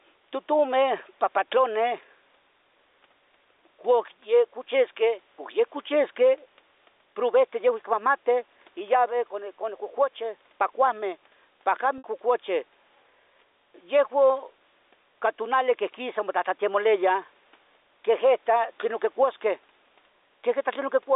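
Speech heard through a G.711 A-law telephone path, with the line band running from 300 Hz to 3.7 kHz and faint room noise about 44 dB below the speech, has two faults. Gain pumping runs through the whole clip. The likely cause is input gain set too high for the microphone, so that a fast limiter or compressor clamps down on every loud syllable. The level swings by roughly 5 dB, which leaves the speech squashed. Packet loss with pitch repetition occurs at 11.98 to 12.04 s. About 60 ms of audio went missing, which fits three 20 ms packets, and the receiver filled the gap by repeating the last pitch period. Because the gap is longer than the roughly 50 ms fade, the repeated sound fades into silence before normal speech returns with a short cross-fade.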